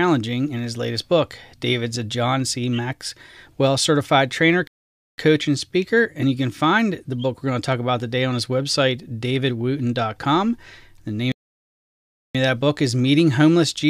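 At 4.67 s, after "certified trainer", the speech halts for 0.51 s before "and speaker and you". At 11.32 s it halts for 1.03 s before "of that book is". These playback stalls, likely from the player running short of data, leave the output silent in mid-flow until the player recovers.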